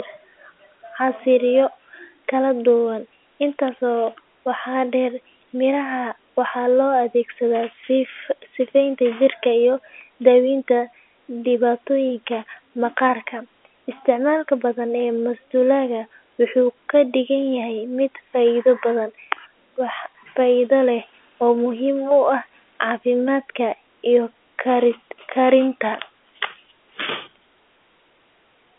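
No technical faults are audible in this speech.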